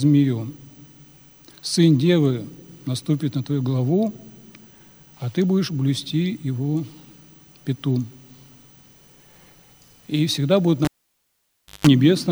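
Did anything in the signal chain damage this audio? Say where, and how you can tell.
Yes: cable pulled and plugged in, 10.85 to 11.87 s, in the analogue wiring. A pop starts 0.97 s of near silence. Then 50 Hz mains buzz lasts 166 ms while only the plug tip touches, ending in another pop as sound returns.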